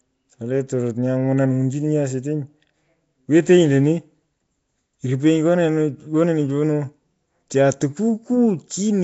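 From start to finish, the speech carries a rough, hissy halo and a smeared, underwater quality, with plainly audible damage and nothing above about 7.7 kHz. The likely cause is Nellymoser compression, the old Flash microphone codec, here at a rate that fits a 32 kbps stream. It spreads a fixed, small bit budget over short blocks, leaving weaker bands with no bits and filling them with noise, which produces the grainy wash and blurred detail.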